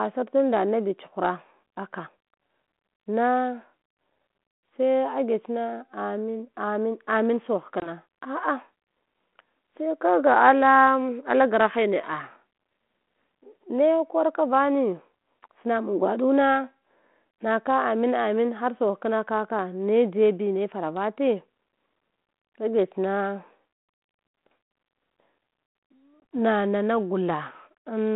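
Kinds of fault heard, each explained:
Packet loss on an ADPCM call: two hard-edged 20 ms silences, each about one packet; unlike a plain dropout, speech resumes slightly distorted while the decoder's predictor resyncs.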